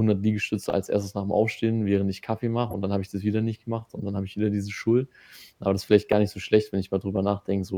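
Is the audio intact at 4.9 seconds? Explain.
Yes, the audio is intact at 4.9 seconds, with no audible fault at that moment.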